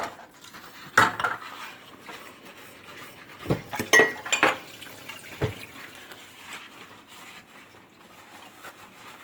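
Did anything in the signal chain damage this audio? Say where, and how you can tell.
Yes. At the codec stage, likely Opus compression at a low bitrate near 24 kbps, so throughout, tones turn rough and grainy while the full band up to 20.2 kHz survives.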